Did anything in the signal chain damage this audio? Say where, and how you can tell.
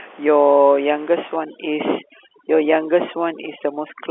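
Yes. Overdone noise removal in the call processing stage damages the audio from 1.36 s to the end. The room noise sits about 23 dB below the speech before that point. After 1.36 s it drops and breaks up into twinkling specks where it used to be. The suppressor is set too hard. It cuts each frequency band that falls near its noise estimate, and it takes quiet parts of the voice along with the noise.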